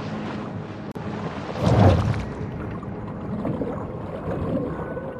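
At 0.92 s the sound drops out for about 39 ms, softened edges, then resumes: a gap at a join of separately encoded pieces, with untrimmed encoder delay and padding, spaced every 4 s.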